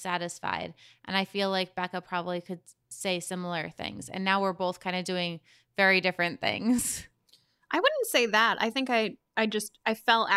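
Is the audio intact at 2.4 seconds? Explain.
Yes, the speech plays through 2.4 seconds intact, with no dropout, glitch or other fault at that moment.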